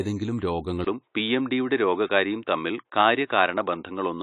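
From the start, the speech has plainly audible coding artefacts and no content above 11.5 kHz, likely from AAC compression. AAC-LC quantises its spectrum against a hearing model, and the lowered cut-off fits a bitrate around 32 kbps.

At 0.85 s the audio drops out for about 20 ms, then continues to the end with nothing above 3.8 kHz. This is likely an input switched to a poorer device with a narrower band. It adds its own background noise far below the speech, and the level stays about the same.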